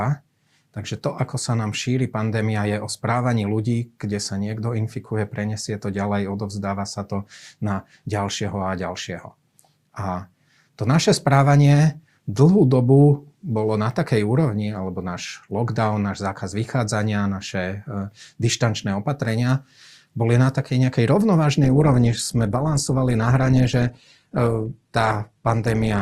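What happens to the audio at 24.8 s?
At 24.8 s you're inside a stretch where the adaptive stream has switched to a lower bitrate, running from 21.64 s to the end of the clip. The connection slowed, so the player swapped in a leaner encode with no gap. The quality drops abruptly: nothing survives above about 12.3 kHz, the top end turns thin, and codec artefacts creep in. It sounds like Opus falling from around 64 kbit/s to roughly 16 kbit/s.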